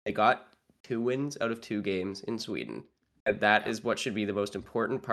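No technical faults are audible anywhere in the speech recording.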